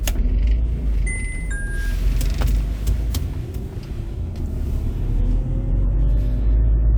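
No technical faults can be heard in this recording.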